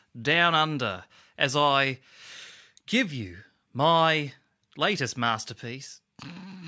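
No technical faults are audible.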